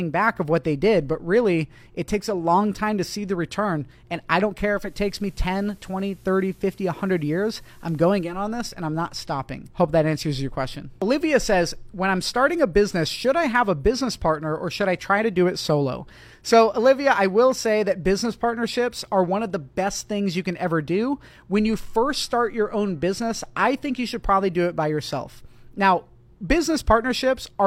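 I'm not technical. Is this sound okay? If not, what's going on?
No. Digital radio blending to analogue, from 4.69 to 8.45 s: the radio lost its digital signal and cross-faded, over 0.29 s, to the same station's FM broadcast. A faint hiss appears, then it returns to digital.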